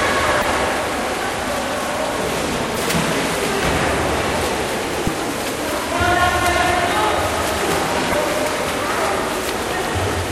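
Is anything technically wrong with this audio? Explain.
Yes. The audio has damaged data in a compressed stream. Four short bursts occur, at 0.40–0.45, 2.73–2.77, 5.03–5.08 and 8.10–8.15 s, each about 50 ms long. Corrupted bytes make the decoder misread frames and lose sync. Each burst is heard as a brief chirp or blip.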